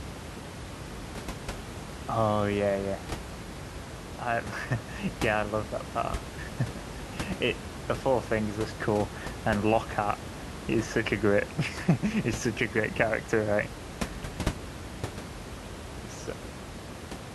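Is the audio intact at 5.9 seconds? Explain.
Yes, the speech is intact at 5.9 seconds, with only the room's own background noise, sitting about 10 dB below the voice, audible beneath it.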